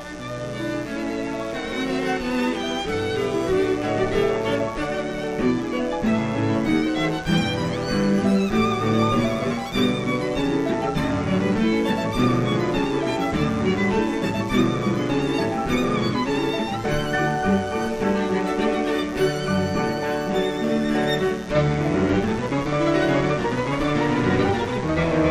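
A steady, raspy mains buzz runs under the audio for its whole length, sitting roughly 20 dB below the signal. Switching spikes from a dimmer, rectifier or unshielded cable enter twice per 60 Hz cycle, showing as evenly spaced horizontal lines at 60 Hz harmonics reaching several kHz on a spectrogram, and sharp ticks 8.3 ms apart on the waveform.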